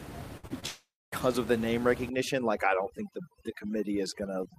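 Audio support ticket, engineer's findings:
Burst of packet loss, 0.37 to 0.45 s: 57 ms of held, fading sound from the jitter buffer/decoder, then 60 ms of audio skipped. Spectrogram shows a frozen, dimming band.

Short concealed packet loss, 0.47 to 0.52 s and 0.60 to 0.64 s: brief smears where about 20 ms went missing. Each appears as a short blurred patch with soft waveform joins.

Long network dropout, 0.66 to 1.14 s: audio stretches into a decaying sound, then about 240 ms of near-silence, with 460 ms lost. This is likely a transport outage. On the waveform, amplitude tapers into a flat gap.

Overdone noise removal, 2.09 s to end: the noise suppressor gates out bands near the room noise, which sits about 11 dB under the speech. The spectrogram shows a blank floor with speckled islands.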